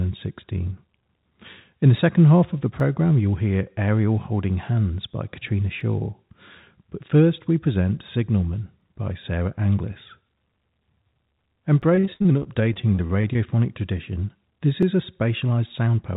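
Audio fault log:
2.80, 5.81, 8.81, 11.82 and 14.83 s: overlapping chunks. The audio was handled in 3.0 s blocks, and each new block began about 6.5 ms before the previous one finished. That sliver of sound plays twice at every join, so a click or stutter recurs at a steady three-second rhythm. The even spacing is the giveaway: these are processing boundaries, not anything in the source.
11.93 to 13.37 s: repeated packet loss (robotic sound). Within this 1.4 s stretch, sound keeps dropping out in short holes, the longest about 68 ms. Each one is papered over by stretching the last fragment. Roughly a quarter of the span is concealment, about 350 ms of patched audio standing in for about 200 ms that never arrived. The rapid gaps and fills give a choppy, robotic texture, heard against the telephone-band sound of the call path, which carries nothing above 4 kHz.
15.43 to 15.96 s: jitter buffer speed-up. 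Here the receiver was holding more audio than it wanted. It trimmed the excess by cutting out many tiny pitch-period-sized slices in quick succession, about 50 ms in total. Playback over this half second runs at about 108% speed without any change in pitch, so the sound briefly seems hurried or rushed before settling back.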